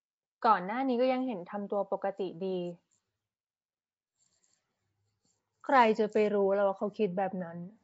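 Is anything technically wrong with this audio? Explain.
Yes, the whole clip carries Nellymoser compression damage, most likely from the old Flash codec. Speech has a rough, hissy halo and a smeared, underwater feel, because weak bands got no bits and were filled with noise. Nothing survives above about 7.7 kHz, which fits a roughly 32 kbps stream.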